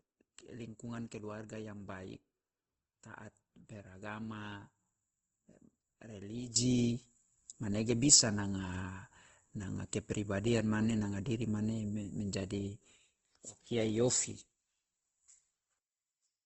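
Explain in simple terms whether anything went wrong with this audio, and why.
Two things went wrong. The whole speech sounds grainy and rough, with the crisp top end missing. That points to Opus compression, likely squeezed to a very low data rate. To save space, the encoder fills in detail with noise instead of the real sound.

The second problem is a sudden gain jump at 6.56 s. From there to the end, the speech and the background noise both get much louder at once. There is no smooth fade. A level setting was likely switched instantly instead of being ramped.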